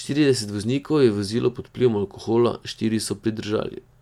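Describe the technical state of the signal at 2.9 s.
At 2.9 s the signal is intact, with no technical fault audible at that moment.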